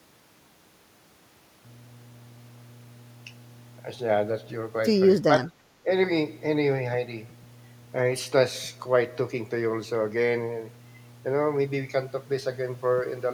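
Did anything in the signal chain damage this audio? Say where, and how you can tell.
Yes. Mains hum enters in the analogue wiring from 1.65 s to the end. A steady 60 Hz tone sits about 20 dB below the speech. A ground loop or nearby transformer is coupling the power line into the signal path.

Speech suppressed in double talk shows up in call processing. The speech dips by up to roughly 15 dB from 5.45 to 5.64 s, then by roughly 10 dB from 5.83 to 5.88 s. The likely cause is an echo canceller mistaking simultaneous talk for echo and turning it down.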